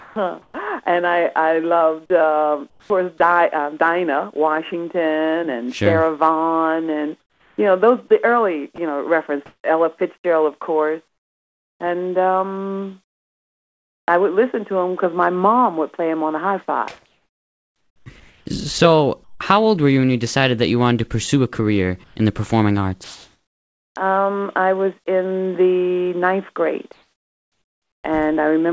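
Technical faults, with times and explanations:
0.00–0.16 s and 8.76–8.78 s, sound dropped by the voice detector: right at the start about 120 ms of actual sound goes missing and steady hiss fills the gap, then around 8.76 s there's a 20 ms bite taken out the same way. The sender's voice detector likely mistook quiet sound for background and stopped transmitting, so the far end played generated noise until the detector woke up again.
0.00–0.54 s, 2.70–2.90 s, 7.20–14.08 s, 17.06–19.40 s, 22.04–23.96 s and 26.92–28.04 s, comfort noise in place of the background: in the pauses the real room tone gets swapped for flat, featureless hiss, in patches adding up to roughly 2.3 s within the long 7.20–14.08 s stretch. At 2.70 s the background is already about 37 dB under the loudest parts and drops a further 9 dB or so. Near 27 s the dip is about 3 dB. That's likely discontinuous transmission, with the receiver synthesising noise shaped roughly like the background.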